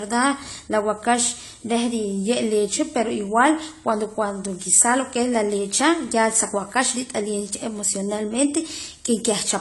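From start to finish, the speech carries AAC compression damage. Nothing sounds above 11.5 kHz, so the top of the spectrum is simply gone and the sound is dull. The coding artefacts are plainly audible throughout. The cause is likely AAC-LC at a low rate, which fits about 32 kbps. Such a coder keeps only what its hearing model rates as most audible. It drops the highest band entirely and coarsely quantises the rest.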